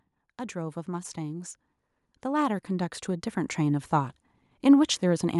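From 0.52 s to 3.94 s the level climbs steadily by about 9 dB, a case of automatic gain rising. The automatic gain control judged the incoming signal too quiet and pushed its gain up over those three and a half seconds. The change is applied to the whole signal, so the speech and the background noise swell together, giving a slow, even lift in loudness rather than a sudden step.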